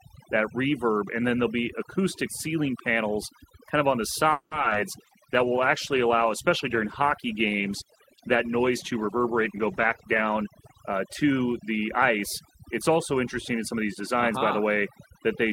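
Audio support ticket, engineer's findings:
Overdone noise removal, throughout: near-silent background with twinkling specks. Unlike codec artefacts, it is present across the whole clip, not tied to one stretch.

Repeated packet loss (robotic sound), 4.31–4.76 s: choppy stretch of repeated gaps, roughly half the span patched by continuing prior sound. The longest gap is 200 ms. Stutters rather than muffles.

Call bitrate drop, 4.91–11.30 s: rough, muffled speech with lost highs, consistent with the encoder falling from about 32 to 16 kbps for about 5.4 s. The degradation is continuous, not choppy.

Jitter buffer speed-up, 9.55–12.91 s: hurried delivery at unchanged pitch, running 106%, with about a fifth of a second trimmed in pitch-period slices. The tempo changes, not the pitch.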